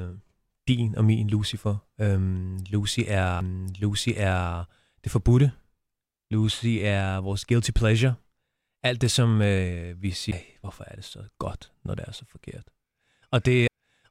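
CD skips at 3.41, 10.31 and 13.68 s: the laser jumps tracks, giving a brief mute and tick, a near-flat gap in the waveform and a thin vertical click on the spectrogram.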